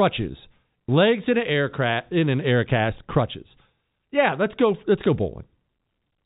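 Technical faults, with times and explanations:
No technical faults can be heard in this speech. The G.711 telephone coding is working as intended, with the sound limited to the narrow band below 4 kHz that fixed-line telephony carries.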